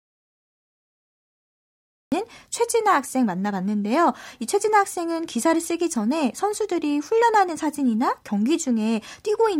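From the very start until 2.12 s the speech is absent, an audio dropout to silence already under way when the clip begins. It's plain silence with no room tone at all, likely the input dropping out while the recorder kept writing, and the speech only cuts in afterwards.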